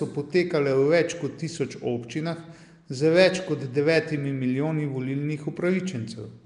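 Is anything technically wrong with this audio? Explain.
Yes. Nellymoser compression runs throughout, likely from the Nellymoser Asao codec, which gives weak bands no bits and fills them with noise. The speech sounds rough, hissy and smeared, with nothing above 10.6 kHz.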